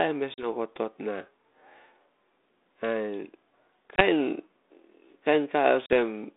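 Speech over a narrowband ADPCM line passing roughly 250 Hz to 3.7 kHz. Packet loss on the ADPCM call leaves hard silent gaps at 0.34, 3.96 and 5.86 s, lasting 40, 20 and 40 ms. The decoder's predictor and step size fall out of step, so the sound returns slightly distorted. It settles by 0.47, 4.02 and 5.94 s.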